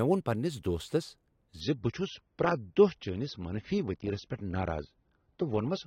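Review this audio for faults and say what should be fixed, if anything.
At 1.61 s the speech drops to an adaptive stream at a lower bitrate and stays there to the end of the clip. The step down is abrupt and leaves no gap. Everything above 6.3 kHz disappears, so the sibilance and air go dull, and codec smearing rises. The sound points to the player switching from roughly 96 kbit/s AAC to a rendition near 27 kbit/s after the connection slowed. On a spectrogram the upper band cuts off sharply at 1.61 s, leaving a flat ceiling at 6.3 kHz, while the waveform runs on unbroken. To prevent it, give the player enough buffer and bandwidth headroom, or cap how low the adaptation ladder can fall for speech content.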